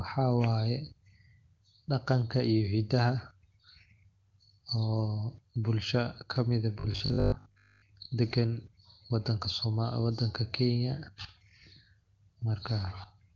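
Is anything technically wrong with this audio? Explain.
Yes. From 6.80 to 7.88 s the speech turns into a rigid, metallic 50 Hz buzz: robotic sound from repeated short buffers, likely from a 20 ms segment repeated while most new audio is skipped.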